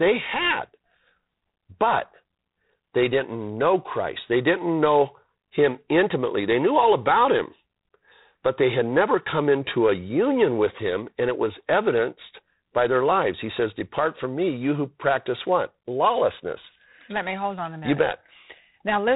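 Speech carrying G.726 ADPCM damage throughout: a harsh hiss that rises with the speech level, consistent with 24 kbit/s. Spectrograms show nothing above 3.8 kHz and grainy noise tracking the speech.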